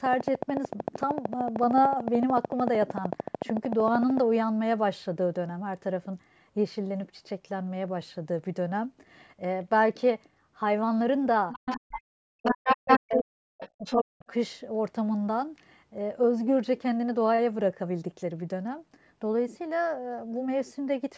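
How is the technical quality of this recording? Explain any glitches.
The recording has some clear problems: a burst of clicking at the start, and a stretch in the middle where the call's echo handling struggled.

From 0.06 to 4.18 s there's a train of clicks, a steady ticking at about 13.4 per second, roughly fifty in all and peaking around 15 dB above the speech. The regular spacing likely points to interference from nearby equipment or a misbehaving interface injecting the same pulse over and over.

The other side's voice is leaking through at 11.5 to 11.8 s, 12.45 to 13.23 s and 13.61 to 14.03 s. A second talker bleeds in, a bit quieter than the speech in the first and last bursts and a bit louder in the middle one. That's likely loudspeaker playback the echo canceller didn't fully scrub from the mic.

In that same window, from 11.83 to 14.3 s, the speech is suppressed in double talk. 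With both sides talking at once, the echo canceller likely couldn't tell its own talker from the echo, so it ducked everything. The main voice dips by up to about 40 dB, chopping out for around two seconds in total.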